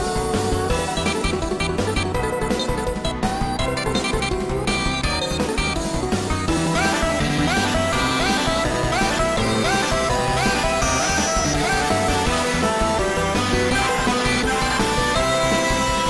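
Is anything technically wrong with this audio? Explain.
No, no technical faults.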